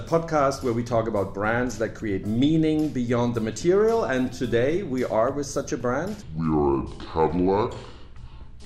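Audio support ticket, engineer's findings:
Section at the wrong speed, 6.22 s to end: sound abruptly drops deep and drags, about seven semitones low, running at 0.629x. Pitch and tempo shift together. Likely cause: playback or edit stage clocking this segment at the wrong rate.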